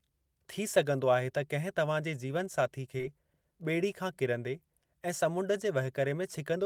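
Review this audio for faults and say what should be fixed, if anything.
Short concealed packet loss occurs twice in a row, at 2.97–3.01 s and 3.01–3.05 s, right after "त किंहिं तव्हांजे जीवनसाथी" and before "बे॒ड़ी खां किरंदे". About 20 ms of audio went missing each time, and the receiver filled the holes by extending the preceding sound for 15 ms and 24 ms before blending back. The result is a brief smear rather than the silent hole of a plain dropout. More jitter-buffer headroom or forward error correction on the link would prevent it.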